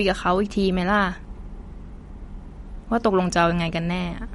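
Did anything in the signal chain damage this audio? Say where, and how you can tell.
Yes, and it's at the codec stage: this speech has plainly audible MP3 compression running the whole way through. The top end stops dead at about 11.2 kHz, and sibilants come out watery and swirly. That's what happens when an encoder runs short of bits. It chops off the treble at a fixed point and zeroes the weaker frequency lines, which then flicker on and off between frames. The damage points to a low bitrate, likely somewhere around 48 kbps.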